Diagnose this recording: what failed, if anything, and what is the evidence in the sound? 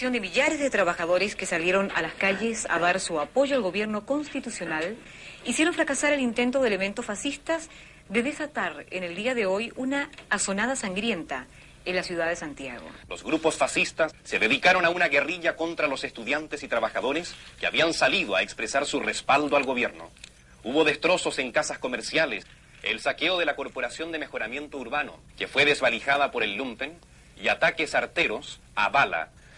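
Nothing failed here: no stage in the chain, from the wiring and converter through to storage and playback, leaves anything wrong in the sound.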